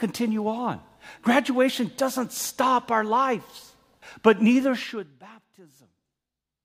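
From 4.74 to 5.24 s, a gain reduction is applied in unsmoothed 1 dB jumps, about fifty a second, instead of as a continuous ramp. That is zipper noise. Over that half second the speech drops by roughly 20 dB, and every abrupt step puts a small discontinuity into the waveform. The result is a rapid ticking or zipping texture laid over the speech while the level falls.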